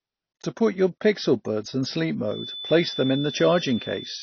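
From the start, the speech sounds dull and smeared, with nothing above about 6.6 kHz and a plainly audible warbly, fizzy texture on sibilants and held sounds. This is likely AAC compression, which fits AAC-LC at a low bitrate near 24 kbps. The codec quantises each frame's spectrum coarsely and drops the top band to save bits. A simple low-pass filter would only dull the sound, but here the band that remains also swirls and churns.

From 2.23 s, just after "pixel buds in sleep", to the end, a thin steady whistle near 3.5 kHz sits well below the speech and swells and fades slowly in level. This is likely a feedback whistle, from a loudspeaker-to-microphone loop held just short of runaway so that one frequency keeps ringing. Unlike a howl, it never builds up, and unlike an electrical tone or mains hum, it is a single high pitch that drifts slowly in loudness.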